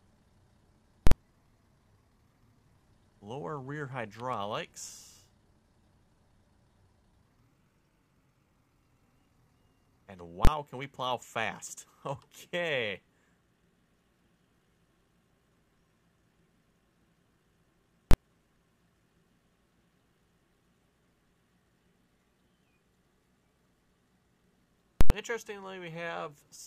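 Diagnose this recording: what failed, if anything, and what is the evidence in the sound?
A processing stage produced invalid numbers at full scale: a calculation went infinite or undefined, and those samples were clamped to maximum positive or negative level for a whole block. Hard bursts pinned at one extreme value appear at 1.07–1.12 s, 10.45–10.47 s, 18.11–18.14 s and 25.01–25.10 s. They last about 46 ms, 23 ms, 23 ms and 93 ms, which fits blocks of 2048, 1024, 1024 and 4096 samples. Each is heard as a loud bang, or a pop at its start and end, with nothing audible inside the burst.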